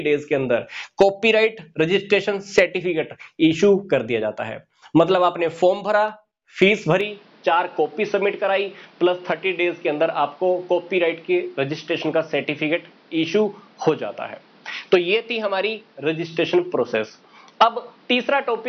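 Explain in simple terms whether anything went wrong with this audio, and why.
At about 7.0 seconds, the recording most likely had its input switched to a poorer device. From then to the end, the sound turns duller and boxier, with nothing above 6 kHz, and a faint new background hiss appears, with no gap and no jump in loudness.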